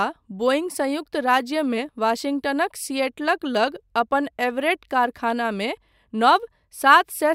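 No technical faults detected.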